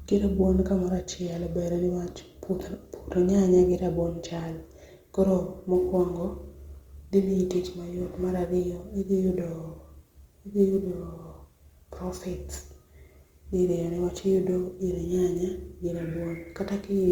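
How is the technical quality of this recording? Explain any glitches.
The recording is compromised by sample clock jitter from 5.75 s through to the end at 17.11 s. The converter's clock wanders by several microseconds, so each sample lands slightly early or late. Where the speech waveform changes fastest, that timing error becomes an amplitude error, some 35 dB below the speech. It is heard as a grainy hiss riding on louder and brighter speech sounds and dropping away in the pauses.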